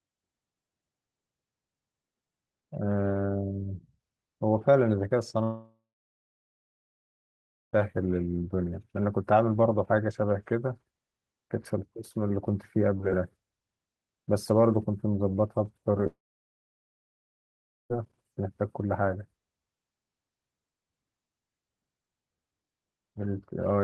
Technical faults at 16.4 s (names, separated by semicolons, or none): long network dropout